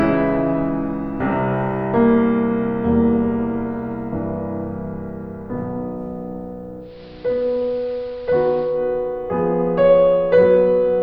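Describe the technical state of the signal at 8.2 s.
At 8.2 s the receiver has lost its digital stream and fallen back to the station's AM broadcast, a digital radio blending to analogue that runs from 6.79 s to 8.83 s after a cross-fade of about 234 ms. The music turns dull, drops about 2 dB in level, and carries a steady hiss sitting roughly 30 dB below the signal until the digital audio returns.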